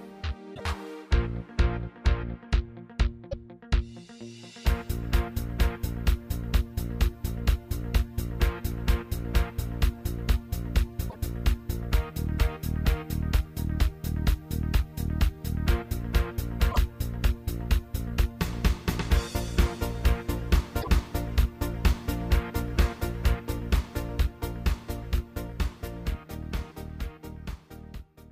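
At 0.54 to 0.61 s, 3.31 to 3.34 s, 11.09 to 11.16 s, 16.71 to 16.77 s and 20.81 to 20.88 s, the audio skips forward with a brief chirp, burst of noise or short gap. This is likely a broken MP3 bit reservoir: dropped frames leave following frames, each about 26 ms, decoding borrowed data from the wrong place.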